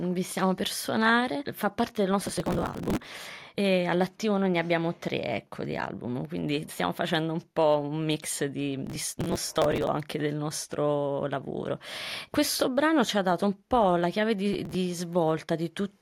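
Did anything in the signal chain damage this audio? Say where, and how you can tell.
Yes. Processor overload crackle damaged it at the driver and buffer stage. Gritty tearing rides on the sound from 2.22 to 3.08 s, from 8.87 to 9.87 s, and briefly from 14.53 to 14.75 s. The processor fell behind and missed buffer deadlines many times in a row. Each missed buffer was skipped, leaving a short hole with hard edges. The click spacing fits buffers of around 5 ms. The crackle stops when the load eases.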